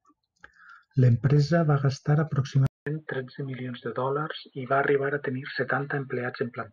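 At 2.67 s the speech drops out for 200 ms. It returns duller and boxier, with nothing above 4.4 kHz, a little quieter, and with a faint new noise floor to the end. The input likely switched to a poorer device mid-recording.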